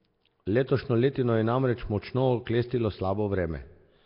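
Throughout, the speech sounds heavily degraded: rough, hissy, smeared and underwater, with nothing above 5.3 kHz. Likely Nellymoser compression, filling unfunded weak bands with noise.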